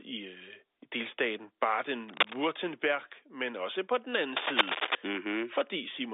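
From 2.08 to 2.35 s and again from 4.36 to 4.95 s, bursts of cable scratch noise rasp over the telephone-band speech, first about as loud as it, then louder. A worn connector shifting is the likely cause. Spectrograms show ragged broadband smears reaching the 3.8 kHz line limit; waveforms show dense, jagged spikes.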